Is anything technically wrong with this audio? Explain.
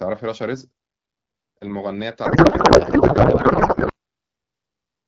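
Yes. A codec payload misread runs from 2.25 to 3.92 s. The sender packs the AMR bits octet-aligned, but the receiver unpacks them as bandwidth-efficient, so every field lands in the wrong place. The speech turns into garbled noise and warble that barely tracks it, then returns. Around it, the clear wideband sound fits AMR-WB at about 12.65 kbit/s.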